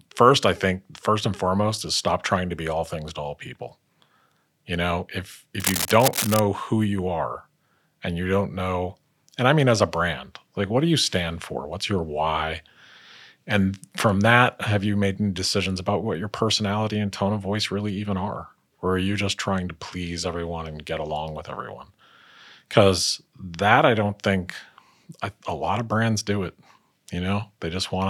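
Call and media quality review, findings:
Cable scratch noise, 5.60–6.39 s. Dense, uneven crackling rustle over the speech, roughly 5 dB below it. Likely a worn cable or connector being moved, its contact resistance jittering. Spectrogram: broadband vertical speckle. Waveform: ragged spikes riding the speech envelope.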